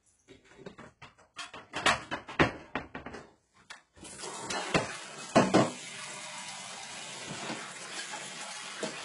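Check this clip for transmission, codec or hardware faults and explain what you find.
One codec fault runs through the whole clip, most likely HE-AAC compression at a very low bitrate, with the sound pointing to somewhere around 12 kbps. The encoder spent its few bits on the lower spectrum and rebuilt the treble by spectral band replication, copying lower bands upward under a coarse envelope. That synthetic top end, which stops at 11 kHz, sits misaligned with the real content below it, giving heavy gritty, metallic smearing on sharp and hissy sounds.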